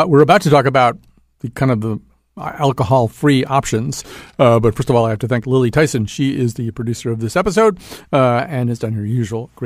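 A clock-matching stage likely applied a drift correction step, abruptly changing playback rate. From 4.11 to 4.75 s the speech runs 6.33% slow, pitch dropping about 113 cents. From 8.39 to 8.94 s it runs 6.33% fast, rising about 106 cents.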